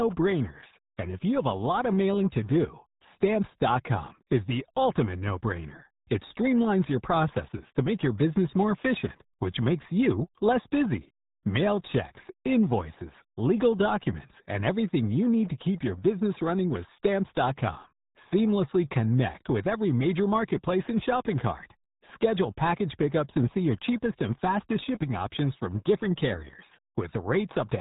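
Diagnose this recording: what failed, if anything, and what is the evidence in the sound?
The failure sits at the codec stage: the speech has been through the RealAudio 14.4 codec for the whole clip. Nothing above 3.8 kHz survives, so the voice is muffled and gargly, with heavy coding damage, which fits a roughly 8 kbit/s low-rate speech coder. On a spectrogram there is a flat ceiling at 3.8 kHz with empty space above it, and the harmonics below look smeared and blotchy rather than cleanly striated.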